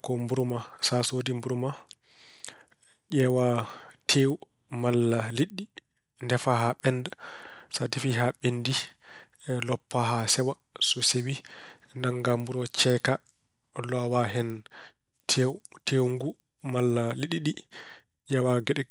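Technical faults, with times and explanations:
Throughout, resampler restarted on every block: the conversion, which points to 24 kHz being raised to 48 kHz, was run afresh on each 100 ms block, so at every block edge the interpolation filter had silence or the wrong end of the block in place of the true neighbouring samples. Each edge carries a small error, heard as regular ticks at 10 per second that ride on the speech and drop away when the signal stops.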